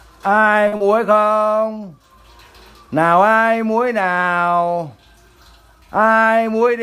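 At 0.67 s there is a short stall from a late packet, lasting until 0.74 s. A packet arrived late and the jitter buffer ran dry. The receiver held the last sound for about 50 ms while it waited. Then playback resumed at the same point, so nothing is lost. But everything after it now runs about 50 ms later. You hear a sound drawn out too long, with a faint buzz or slight dip.

Right after, from 0.76 to 0.82 s, comes a short concealed packet loss. About 40 ms of audio never reached the decoder in time. The receiver patched the gap by extending the preceding sound and then blending back into the real signal. This time the original material is gone for good. It comes across as a brief smear or wobble. Any short sound in that gap may simply disappear.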